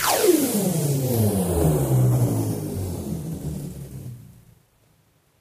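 No technical faults can be heard in this audio.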